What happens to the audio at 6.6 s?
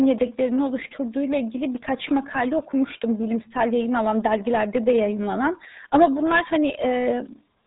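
The RealAudio 14.4 codec damage runs through the whole clip, 6.6 s included: speech sounds muffled and gargly, nothing above 3.8 kHz, which points to an 8 kbit/s dial-up-era codec.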